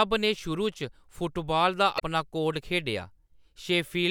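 Damaged data in a compressed stream breaks into this speech clip from 1.96 to 2.02 s, right after "फुटबाल दा". For about 60 ms the decoder misreads the corrupted frames, loses sync and hunts for the next valid frame header, producing a brief glitch.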